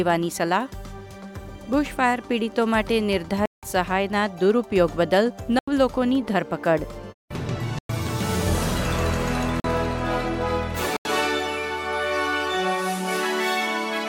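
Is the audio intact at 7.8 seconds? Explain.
No. A block of digital silence runs from 7.79 to 7.89 s, about 107 ms long. The audio drops out there, likely because the output buffer was not filled in time. The sound cuts out abruptly, leaving a short hole.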